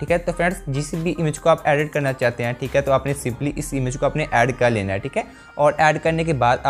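Nothing in this clip stands out as a technical fault, so there's nothing to flag at any point along the way.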